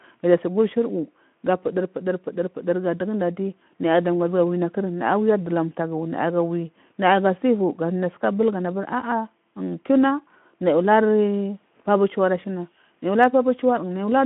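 A speech recording with no technical fault to report. What can be heard of the transmission path is a telephone-style band of roughly 150 Hz to 3.4 kHz and the light, slightly grainy texture of a Speex codec, which fits a setting around 15 kbps.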